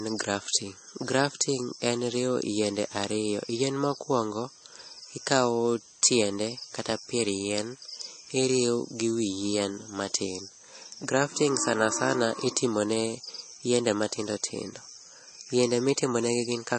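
Low-bitrate audio saved at a high bitrate, throughout the clip: the speech has nothing above 8.4 kHz and carries smeared, swirly MP3 artefacts. The likely cause is a very low-bitrate MP3, around 32 kbit/s, re-encoded at a much higher rate that cannot restore what was lost.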